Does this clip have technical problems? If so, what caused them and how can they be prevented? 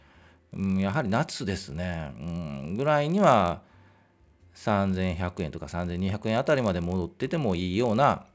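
Yes. Throughout the speech there's a buzz at 50 Hz that only shows up while there's signal. That's the resampler restarted on every block: the sound seems to have been converted in separate 20 ms chunks, which fits a step from 44.1 kHz down to 16 kHz. Each chunk was filtered without its neighbours' samples, so every edge picks up a small error, and at fifty edges a second those ticks merge into a buzz. To prevent it, use one streaming resampler that carries its filter state across block boundaries instead of starting fresh per block.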